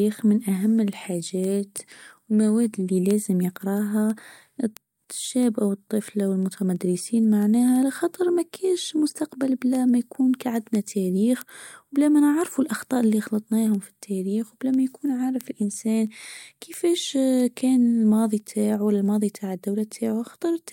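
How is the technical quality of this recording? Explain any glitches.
Sharp ticks run through the speech from 0.11 s to the end, arriving about every third of a second, roughly seventy in all, some louder than others. These are word clock ticks: the digital link was read by a device running on its own clock, not locked to the sender, and off by something like 70 ppm. Each time the two clocks slipped a sample apart, a single sample was dropped or repeated, leaving a brief discontinuity that sounds as a click.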